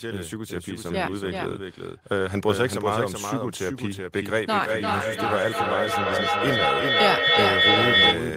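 From the start, the speech carries a doubled audio track: a second full-band copy trails the original by roughly 0.4 s at about 5 dB lower, with no decay or room colour. This likely comes from a slower capture path recording the same signal again.

From 4.42 s to 8.3 s, feedback echo between two devices sets in: another device's microphone picks up the returned speech and sends it back round, repeating roughly every 0.3 s, thin and ringing, building to about 6 dB above the speech.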